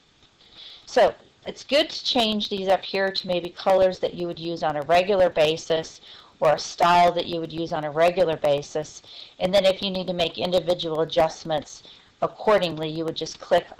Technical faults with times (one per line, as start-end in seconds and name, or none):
0.08-13.71 periodic USB or driver dropouts